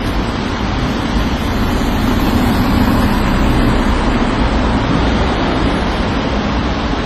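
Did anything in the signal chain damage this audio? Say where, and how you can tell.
Yes. At the codec stage, the audio was likely transcoded between lossy codecs, an MP3 pass and then HE-AAC, pointing to about 40 then 24 kbit/s. Throughout, nothing remains above 14.4 kHz, and the artefacts of both codecs are heard together.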